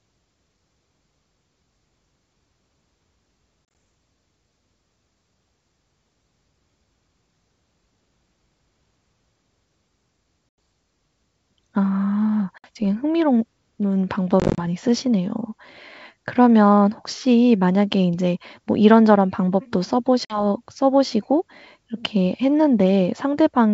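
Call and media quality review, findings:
Packet loss on an ADPCM call: silent gaps at 3.65–3.75 s and 14.40–14.65 s (scattered holes up to 30 ms), and at 10.49, 12.58 and 20.25 s. The G.722 decoder's predictor and step size drift after each gap, so audio returns briefly and slightly distorted, at times clicky or off-level.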